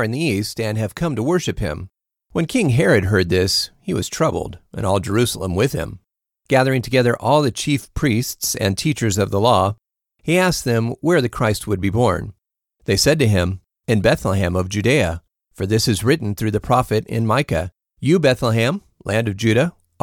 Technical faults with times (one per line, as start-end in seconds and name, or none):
none